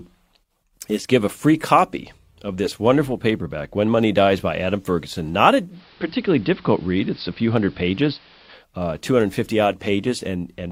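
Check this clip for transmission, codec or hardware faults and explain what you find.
One fault turns up, in the middle of the speech. From 5.69 to 8.65 s the sound turns dull and faintly hissy, with a level shift of about 1 dB: digital radio blending to analogue, where the receiver lost digital reception and cross-faded, over about 137 ms, to the station's AM broadcast, then back.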